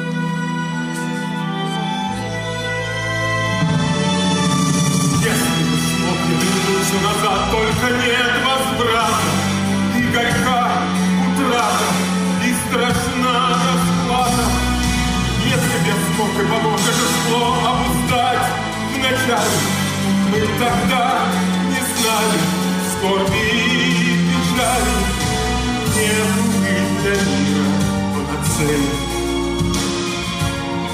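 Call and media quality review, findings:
No faults found on review; no dropouts, clipping, distortion or timing problems heard anywhere in the clip.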